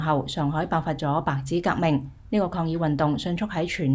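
No technical faults can be heard anywhere in the audio. Nothing in the sound points to trouble in the path that captured or delivered it.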